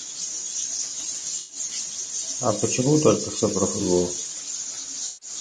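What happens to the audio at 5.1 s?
At 5.1 s the audio falls inside a stretch of AAC frame loss with concealment, lasting from 5.07 to 5.29 s, about 140 ms. The decoder had no data for that span and rebuilt it from the last good spectrum, so the sound turns smeared, noisy and phasey instead of cutting out. On a spectrogram the harmonic lines blur into a uniform wash with noise filling the gaps. In the waveform the envelope turns flat and unnaturally smooth for that short block.

The same moment sits within a longer span of speech cut by the noise suppressor, running from 4.06 s to the end of the clip, with dips of up to about 13 dB across roughly a second and a half. The suppressor mistook parts of the speech for background and turned them down, so soft consonants and word endings sound swallowed and faint. A spectrogram shows the quieter, high-frequency consonant energy sinking toward the room-noise floor, which sits about 25 dB below the speech. 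The waveform shows sudden shrinking of the tails of syllables.

Under both runs the rough, grainy texture of low-delay AAC compression, likely AAC-ELD at 32 kbps. Its short frames resolve pitch harmonics poorly at this bitrate, leaving noise between the harmonics and a thin or synthetic-sounding top band. On a spectrogram the harmonics look fuzzy, with speckled fill between them and a weakened or patchy upper band.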